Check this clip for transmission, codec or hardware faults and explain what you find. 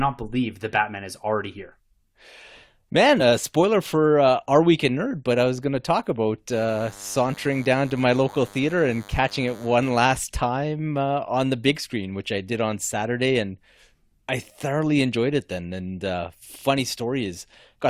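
Two faults are present in this speech clip.

At 3.19 s, just before "uh spoiler for uh", there is damaged data in a compressed stream. Some of the encoded bytes there are wrong. The decoder cannot read the frame correctly. It loses its place and hunts for the next valid frame header. The result is a brief chirp or blip.

From 6.51 s to 10.18 s there is DECT cordless phone buzz. It starts after "going to talk about" and stops before "time uh on the". A nearby DECT handset or base sends radio bursts every 10 ms. The audio circuitry rectifies them into sound. This gives a thin, steady buzz at 100 Hz, rich in harmonics. It sits well below the speech, roughly 25 dB down.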